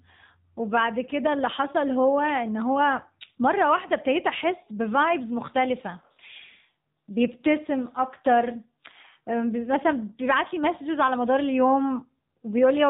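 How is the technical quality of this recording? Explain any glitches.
The recording has one fault, present from start to finish: AMR narrowband mobile codec. The speech is band-limited to telephone quality, with nothing above 4 kHz, and sounds buzzy and synthetic. A vocal-tract model driven by sparse pulses per 5 ms subframe rebuilds the speech, and the plainly audible damage fits a low mode around 7.4 kbps.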